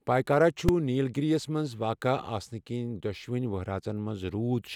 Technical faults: invalid numbers at full scale

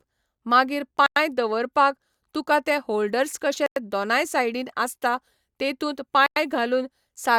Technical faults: gap between chunks

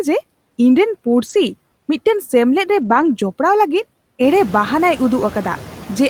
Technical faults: noise suppressor artifacts; lost packet rebuilt from error correction

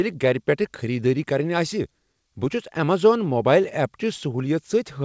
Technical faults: clock drift between sender and receiver; repeated timing corrections

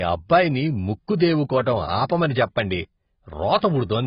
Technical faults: AAC compression

